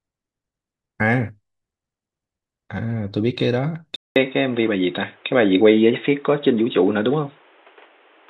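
At 3.96 s the input likely switched to a poorer device, after a 200 ms silence. From there to the end nothing above 3.8 kHz survives, so the speech turns dull and boxy, shifts a few decibels in level, and gains faint background noise.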